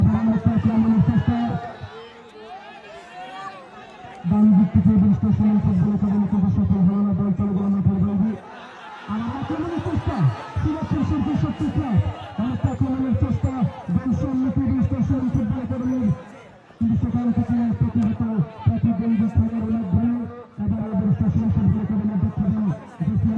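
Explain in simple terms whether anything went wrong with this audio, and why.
Nothing went wrong here; no faults can be heard.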